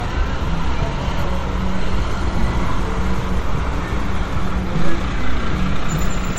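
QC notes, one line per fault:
Throughout, generation loss: the audio has a swirly, smeared, hollow quality beyond what one pass at a low bitrate would give, attacks are blurred, and nothing is present above 16.1 kHz. This likely comes from repeated MP3 decoding and re-encoding, around five passes at roughly 60 kbit/s. Each pass quantises again on a shifted frame grid, so the noise and spectral holes pile up rather than staying fixed.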